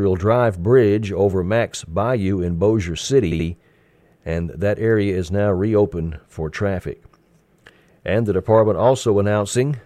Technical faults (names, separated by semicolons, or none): repeated frames